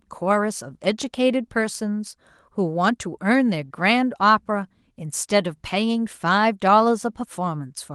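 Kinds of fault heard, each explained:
No kinds of fault are heard in this speech clip.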